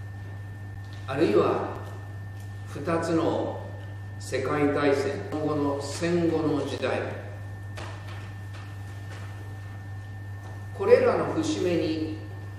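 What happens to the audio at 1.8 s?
At 1.76 s there is a gap between stream segments: a hole of about 6 ms where the sound drops abruptly to silence and resumes just as sharply. The timestamps of two consecutive segments fail to meet, and the player pads the mismatch with silence. Its position fits a segment boundary on 1-second segments. Nothing is removed; the silence is inserted, so everything after it arrives about 6 ms late, heard as a brief click-like dropout.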